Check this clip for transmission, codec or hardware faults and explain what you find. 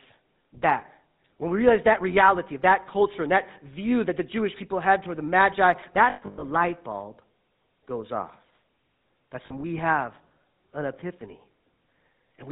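Two faults are present: the whole clip has passed through the GSM full-rate codec, and GSM frames were lost twice, near 6.1 s and 9.46 s.

GSM full-rate codec (throughout): the speech is rebuilt from a vocal-tract model driven by sparse, regularly spaced pulses, consistent with 13 kbps full-rate GSM, so it sounds plainly buzzy and gravelly. A spectrogram shows a hard ceiling at 4 kHz and a coarse, smeared harmonic structure.

Lost GSM frames (6.1 to 6.44 s, and 9.46 to 9.53 s): missing frames were filled by repeating the last good frame's settings. In the first event about 260 ms is lost across 320 ms, with the longest gap around a tenth of a second. These gaps sound like a rough, metallic ring. On a spectrogram they show as frozen, repeated bands. The second event is a 40 ms blip that leaves a brief metallic ring.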